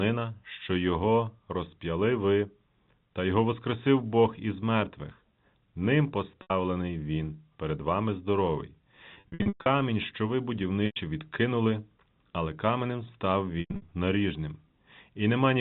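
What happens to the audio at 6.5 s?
Packet loss with pitch repetition hits at 6.42 to 6.50 s. About 80 ms of audio is lost, which fits four 20 ms packets. The receiver loops the last pitch period, giving a brief held buzz that fades to silence before the speech cross-fades back in.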